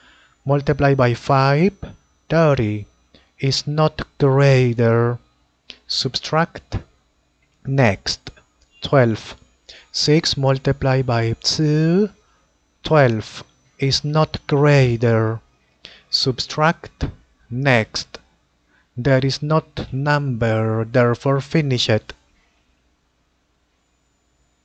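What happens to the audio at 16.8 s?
Nothing goes wrong at 16.8 s: the audio there carries on intact, with no dropout, click, glitch or other fault at that point.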